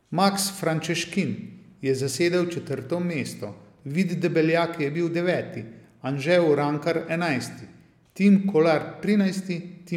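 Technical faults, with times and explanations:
No technical faults can be heard in this clip.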